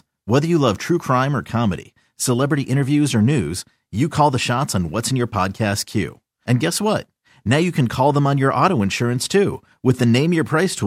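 No technical faults can be heard anywhere in the recording; the signal stays continuous and stable throughout.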